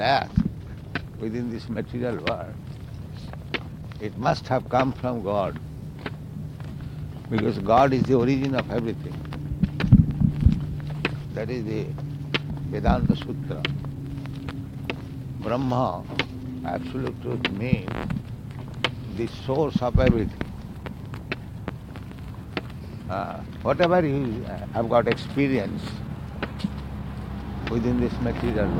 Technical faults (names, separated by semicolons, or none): sample clock jitter